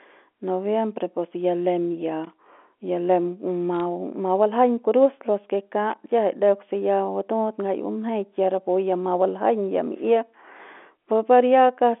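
Speech heard over a G.711 A-law telephone line, band-limited to roughly 250 Hz to 3.5 kHz, carries two bursts of loose connector crackle: 2.24 to 2.47 s, between "pus ya lem ya" and "ya lem ma ma", and 5.90 to 6.06 s, after "baljaiñ kurus los ke" and before "kiajai deuk se ya". Each is an irregular scratchy patch where a worn contact repeatedly breaks and remakes the circuit, chopping the signal. A separate sharp tick at 3.80 s, just after "ya lem ma", comes from bit errors on the digital phone line. Flipped bits corrupt individual samples, and errors in high-order bits produce an abrupt click. The tick suggests a small cluster of damaged frames at a low error rate, a few bits per thousand.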